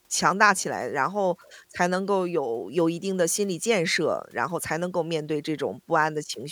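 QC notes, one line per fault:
No faults found. Nothing in the speech needs a note.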